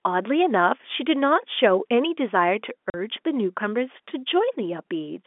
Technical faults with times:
2.90-2.94 packet loss filled with silence

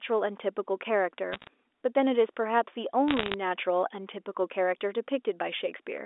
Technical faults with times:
1.32-1.47 bit errors on a digital phone line
3.08-3.34 bit errors on a digital phone line

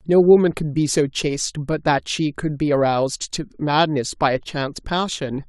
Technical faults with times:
none

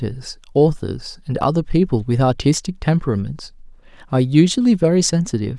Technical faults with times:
none

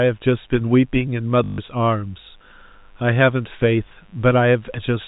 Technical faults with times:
0.00-5.07 mains buzz
1.44-1.58 packet loss with last packet repeated

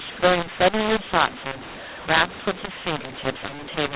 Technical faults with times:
0.00-3.95 mu-law and A-law mixed up

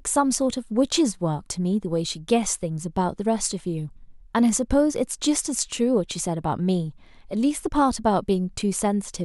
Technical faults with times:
none

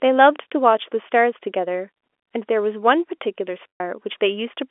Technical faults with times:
3.70-3.80 packet loss with pitch repetition

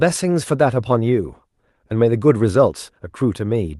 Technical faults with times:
none

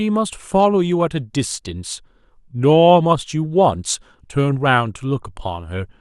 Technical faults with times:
0.13-5.99 clock slip clicks

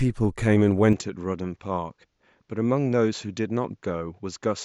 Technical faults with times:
0.93-4.64 input switched to a poorer device

